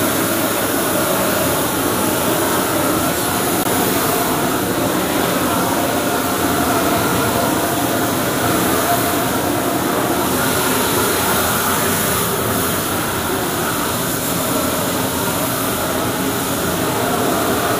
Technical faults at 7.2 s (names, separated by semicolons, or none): none